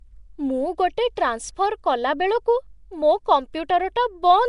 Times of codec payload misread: none

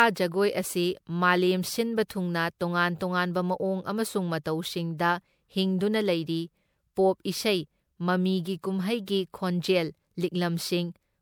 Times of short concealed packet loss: none

